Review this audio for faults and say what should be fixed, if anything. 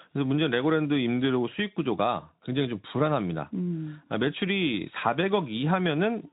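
Nothing here needs fixing: the speech carries the light, slightly grainy texture of Speex coding at a moderate setting, and the band stops at about 3.9 kHz as that codec path would give.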